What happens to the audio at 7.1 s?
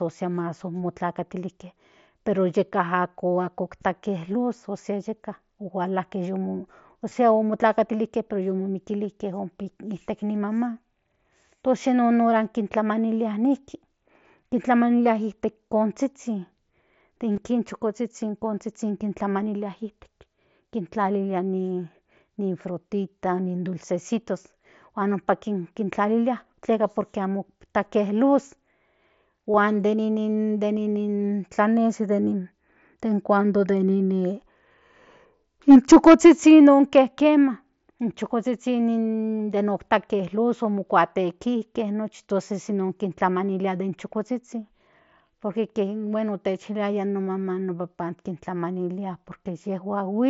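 At 7.09 to 7.12 s there is concealed Bluetooth headset packet loss. A brief run of headset packets, about 22 ms worth and likely three or so in a row, never reached the phone. The receiver filled the hole by repeating the best-matching stretch of the preceding waveform, so you hear a short buzzy, held tone at full level with a slight warble as real sound resumes. A plain dropout would dip into silence instead. The mSBC wideband link around it carries on normally.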